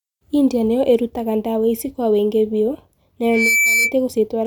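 After "ici kwa wiingi biũ", a 2.3 kHz tone swells over about a third of a second into a squeal as loud as the speech, from 3.22 to 3.95 s: loudspeaker feedback squeal, the microphone re-amplifying its own loudspeaker.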